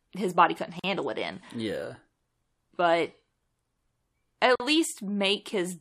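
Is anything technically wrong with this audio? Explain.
Yes, the speech breaks twice at gaps at joins of encoded pieces. Separately encoded segments were spliced without trimming each encoder's start-up delay and last-frame padding, so roughly 44 ms of silence opens from 0.79 to 0.84 s, between "his body couldn't" and "it in," and again for about 45 ms from 4.55 to 4.60 s. Each dropout has smeared edges, then the speech resumes where it stopped.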